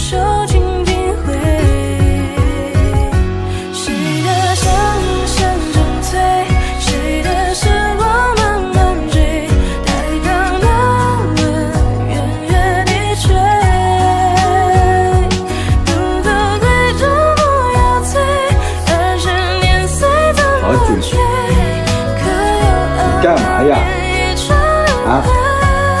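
No technical faults can be heard anywhere in this audio. Nothing in it points to a problem with how the sound was captured, processed or delivered.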